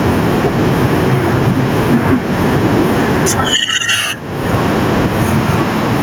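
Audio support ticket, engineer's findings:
Gain pumping throughout the speech: gain swings by around 20 dB with each loud syllable. Likely mic gain set too high into a fast limiter. Not a noise gate, which would cut the gaps rather than lift them.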